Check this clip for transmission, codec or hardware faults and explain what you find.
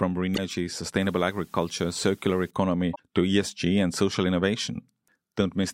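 Three faults turn up in this speech clip: two bursts of damaged data in a compressed stream and one stretch of low bit depth with dither.

At 0.33 to 0.38 s and again at 2.91 to 2.99 s, corrupted bytes in the compressed stream threw the decoder off its frame boundaries until it found the next valid header. Each is heard as a brief glitch in the speech.

From 1.01 to 2.51 s the signal was reduced to 9 bits, with dither added before rounding, so the quantisation error became random rather than signal-shaped. The result is a steady, even hiss about 35 dB below the speech, without added distortion.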